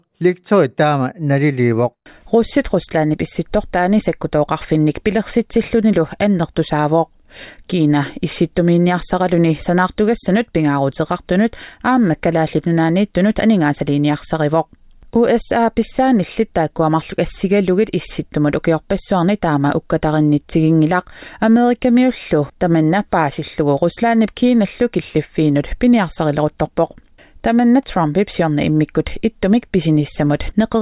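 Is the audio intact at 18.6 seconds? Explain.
Yes, the audio at 18.6 seconds is intact, with no dropout, glitch or other fault at that moment.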